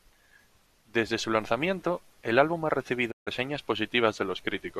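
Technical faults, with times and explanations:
3.10–3.29 s, digital broadcast dropout: just after "lanzamiento el álbum ha" the speech fades out over 20 ms into a silent hole of 144 ms. The receiver muted while frames were missing or corrupt, a gap fitting six 24 ms frames, so that speech is lost.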